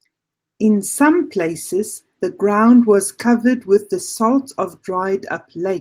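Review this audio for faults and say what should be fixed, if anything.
Nothing here needs fixing. The Opus voice compression holds the full band with only light coding damage to the speech, which fits a hybrid mode at around 24 kbps.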